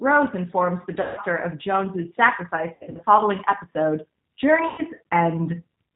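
Throughout, the speech carries the plainly audible coding of the G.729 codec. Nothing passes above 4 kHz, and the voice sounds slightly rough and synthetic, which fits an 8 kbit/s model-based coder that rebuilds each 10 ms frame from a vocal tract filter, a pitch predictor and a few pulses. This is a synthetic roughness rather than the smeared, swirling artefacts of a transform codec. It is also present the whole time, not in bursts.

VoIP packet loss concealed by the speech codec follows at three points. From 1.0 to 1.2 s, just after "informs the", about 160 ms of audio is missing. From 2.75 to 3.03 s, shortly before "following episode", another 160 ms is lost in scattered runs of up to 60 ms across 240 ms. From 4.68 to 4.82 s, about 100 ms is lost. Each time, the decoder stretches the last pitch and filter into a buzzy tone or coloured noise that fades, and the voice stays weak for a short while after audio resumes. 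That fade and slow recovery set it apart from plain dropouts, which cut to abrupt silence or clicks.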